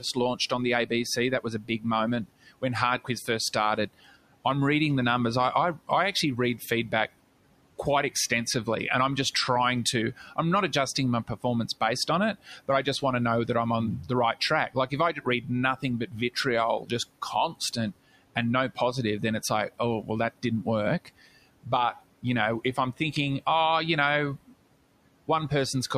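Noise suppressor artifacts run through the whole recording. The suppressor pulls down the bands it judges to be steady noise by about 18 dB, frame by frame, so the room noise, which sits about 20 dB under the speech, drops away in the gaps and swells back beneath each phrase. On a spectrogram the noise floor turns patchy and speckled, with isolated time-frequency cells flickering on and off instead of forming an even haze.

Speech cut by the noise suppressor occurs in five stretches, where the gain meant for noise also catches quiet parts of the speech. From 0.0 to 4.34 s, roughly 0.7 s of it is turned down by as much as about 19 dB. From 5.79 to 6.93 s, about a tenth of a second drops by up to about 10 dB. From 9.93 to 17.77 s, about a second in total falls by up to about 16 dB. From 18.75 to 23.01 s, under half a second is cut by up to about 16 dB. From 24.43 to 25.51 s, about a tenth of a second loses up to about 18 dB. 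Soft consonants and word tails sound swallowed. The waveform shows abrupt dips in the envelope, and the spectrogram shows faint high-frequency consonant energy turned down.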